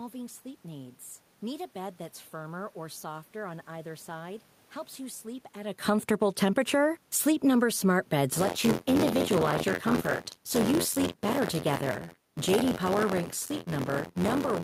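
Just after "you sleep at a", around 5.73 s, the automatic gain falls: the AGC decides the input is too hot and starts easing its gain down, about 6 dB over roughly two seconds to 7.69 s. The voice and the room noise behind it sink together, which is how you tell it from the talker shifting position, as happens at about 5.5 s. It does the same again from 11.81 to 13.35 s, a smaller drop of about 3 dB, with the level gradually settling lower.

Overlapping that first drop, from 6.07 to 7.07 s, the automatic gain is also rising, pulling about 3 dB back up over one second. You hear a short swell of voice and background together that fights the downward trend, so the level wobbles through that stretch rather than gliding down cleanly.

From 8.31 s to the end there's buffer tearing. The write side and the hardware read side of the ring buffer have drifted so they cross inside every period. A small slice of each buffer, something like a sixth, carries audio from about 50 ms earlier, with hard joins on both edges. 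That repeats at 86.1 Hz, which fits a 512-sample buffer at 44.1 kHz. It comes across as a steady robotic buzz riding on the voice, present only while there's signal.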